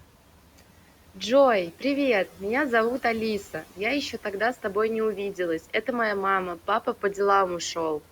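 The noise suppressor is cutting into the speech at 0.01–1.17 s, 2.27–2.41 s, 3.43–3.79 s, 5.6–5.88 s and 6.56–7.17 s, mistaking quiet stretches for the room noise sitting about 25 dB down and pulling them down by about 9 to 12 dB, so endings and soft bits go faint and swallowed.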